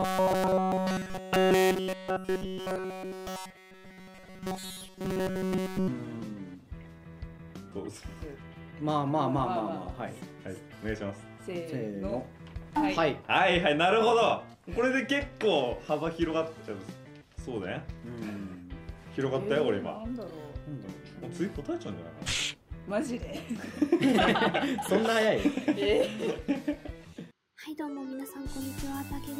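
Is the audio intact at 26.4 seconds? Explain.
Yes, the audio is intact at 26.4 seconds, with no fault present at that moment.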